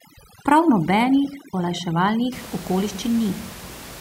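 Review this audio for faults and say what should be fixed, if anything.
Overdone noise removal from 0.00 to 2.32 s: a denoiser gates bands near its noise estimate, breaking the background into twinkling, warbling specks; the spectrogram shows scattered isolated specks between harmonics. Lower the reduction strength so the room noise, about 17 dB below the speech, is only partly attenuated.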